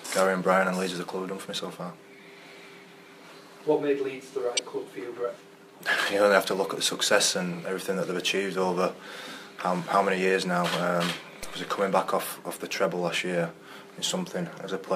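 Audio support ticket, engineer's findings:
Corrupt frame decoded, 4.57 to 4.59 s. Short blip of misplaced energy, peaking around -10 dBFS, spanning one frame. Probable component: codec or transport. Flipped bits decoded as wrong gains and spectral codes instead of being concealed.

DC step, 11.43 s. Single low thump. Waveform zero line jumps abruptly, then the offset decays back through a 2 Hz high-pass. Probable component: converter recalibration or a switched input carrying offset. Underlying audio continues unchanged through the step.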